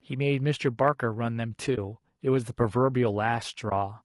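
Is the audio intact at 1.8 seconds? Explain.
No. AAC frame loss with muting runs from 1.75 to 1.78 s. The decoder zeroed a missing stretch, about 20 ms, so the sound fades into a brief dip and returns. Low-delay AAC compression runs throughout, likely AAC-ELD at 32 kbps. Its coarse coding adds noise between the pitch harmonics, leaving the speech audibly rough and grainy.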